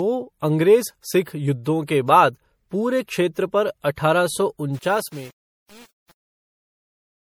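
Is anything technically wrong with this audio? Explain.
Yes, there are two problems.

Generation loss is audible across the whole clip. The speech sounds swirly, hollow and smeared, with softened consonant attacks. This likely comes from repeated MP3 encoding, a few passes at around 64 kbit/s, with each pass re-quantising on a shifted frame grid and stacking more noise and spectral gaps.

Truncation distortion on a fade runs from 4.74 s to 7.38 s, during the fade-out. The fade was computed at only 7 bits without dither, so as the level drops the waveform collapses into coarse steps. The tail turns gritty.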